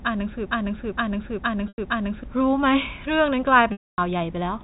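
From 0.46 to 2.24 s, the playback chain likely stalled and kept re-sending the last fragment it held, producing a broken-record loop. A slice of about 0.46 s repeats exactly four times back to back, and the speech that should have filled that stretch is gone. Instead of moving forward, the clip stutters in a rigid cycle.

Inside that loop, from 1.68 to 1.78 s, 100 ms of audio went missing. The receiver covered the gap by re-playing the last pitch period, which is packet loss with pitch repetition. The gap length fits five 20 ms packets. It is heard as a briefly held, buzzy tone that fades out over roughly 50 ms.

A longer loss runs from 3.72 to 3.98 s and spans 260 ms, consistent with thirteen such packets. The same concealment holds a buzzy pitch, lets it die into silence, and then cross-fades briefly back into the speech.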